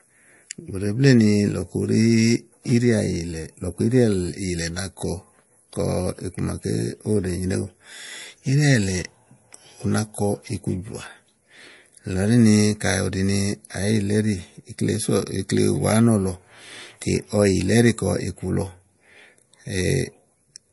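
Throughout the speech there is plainly audible damage, likely from MP3 compression at a low bitrate near 48 kbps. Nothing survives above 11.3 kHz, a flat shelf on a spectrogram, and weak lines flicker on and off between frames, giving watery, swirly sibilants and smeared consonant attacks.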